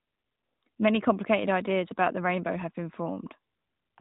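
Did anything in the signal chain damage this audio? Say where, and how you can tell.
No, nothing in the signal chain stood out as damaging this speech on listening.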